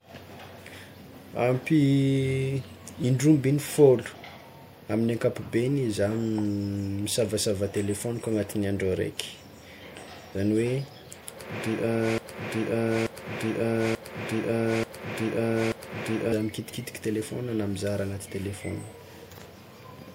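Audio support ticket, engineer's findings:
Broken-record loop, speech, 12.18 to 16.32 s: one 0.88 s fragment repeats five times back to back; the original audio for that span is lost. Waveform and spectrogram show identical blocks tiling. Likely cause: stalled player or stream resending its last buffer.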